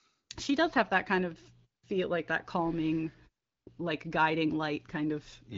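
No technical faults can be heard in this speech recording.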